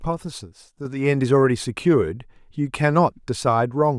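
A speech clip with a sudden gain jump at 0.85 s, where the level rises by about 6 dB in a single step and stays there to the end. Speech and background noise lift together, which likely points to a digital gain change applied without any ramp.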